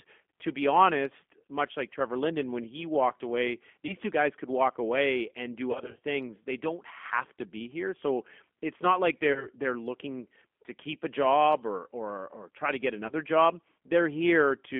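Throughout, the speech sounds like the G.729 codec squeezed it into a 200 Hz to 3.5 kHz phone band at 8 kbit/s, plainly rough and synthetic. Then VoIP packet loss concealed by the speech codec turns short smears at 3.87 s after "when he walked away", 5.72 to 5.99 s after "walk away and do", 9.33 s after "so it's not like", and 13.07 s. In each, the decoder stretches the last sound, and the voice stays weak briefly afterwards.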